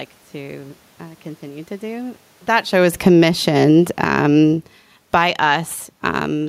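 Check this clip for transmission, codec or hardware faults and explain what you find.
The faults here are level changes from automatic gain control, not transmission or codec damage. Automatic gain falling happens from 2.53 to 3.3 s, just after "uh continue to do", and again from 3.85 to 5.3 s. The control judged the input too loud and lowered its gain by about 8 dB, then about 12 dB, so voice and room noise sink together. Automatic gain rising follows from 5.21 to 5.85 s. The gain climbs back about 7 dB, and voice and background swell at once. The level shift near 2.5 s, as the talker moves relative to the microphone, is not a system fault.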